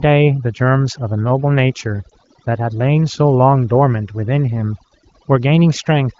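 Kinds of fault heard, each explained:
Overdone noise removal, throughout: an over-strong denoiser cuts frequency bands judged to be noise, leaving near-silent gaps with twinkling specks.
Lost AMR speech frames, 2.09 to 2.12 s: one 20 ms frame failed, so the decoder reused the previous settings at lower gain, causing a brief dip or warble.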